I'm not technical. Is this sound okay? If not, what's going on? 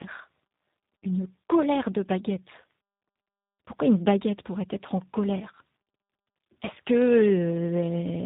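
No. The call went through tandem speech coding: two different speech coders in a row, each squeezing the speech again after the last had already damaged it. Throughout, it sounds rough, muffled and warbly, with nothing above 3.8 kHz.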